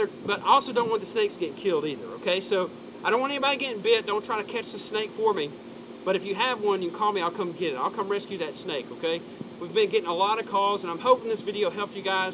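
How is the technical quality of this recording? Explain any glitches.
Nothing stood out on listening, beyond the narrow, telephone-like band of a call line that carries nothing above about 4 kHz.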